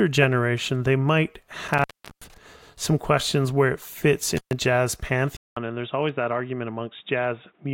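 Intermittent contact occurs from 1.68 to 2.38 s, after "generation they might" and before "some questions where it", and again from 4.37 to 4.53 s, just after "questions where it fits". A loose connection breaks the signal path, so the speech drops out, for about 376 ms the first time and about 128 ms the second. Crackle marks where the contact opens and closes, and only faint hiss remains while it is open.

An input switched to a poorer device is the likely cause of the change at 5.37 s, which lasts to the end. A silence of about 200 ms marks the switch. After it the speech sounds dull and boxy because nothing above 3.8 kHz gets through. The level drops by around 5 dB, and a different background noise comes in, roughly 45 dB below the speech.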